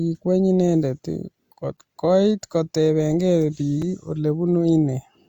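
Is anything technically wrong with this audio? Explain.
Yes. At 3.82 s, a gap between stream segments: two 1-second segments' timestamps leave about 4.2 ms unfilled, so playback inserts a brief, hard-edged silent dropout in the speech.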